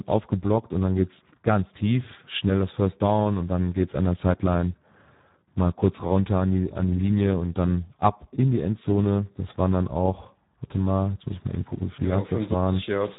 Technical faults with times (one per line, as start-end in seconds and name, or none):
0.00-13.19 Speex codec